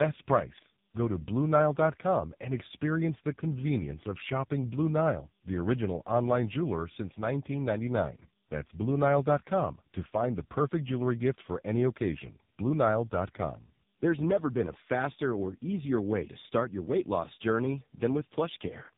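Speech throughout, and it carries tandem speech coding the whole way: it sounds like it went through a GSM full-rate coder, across a plain A-law link, then got squeezed again by AMR-NB at a low rate, something like 6.7 kbit/s. The second coder is working on the first one's already-mangled output, so the damage stacks up. You get that rough, warbly texture on top of the muffling, with nothing above 3.7 kHz.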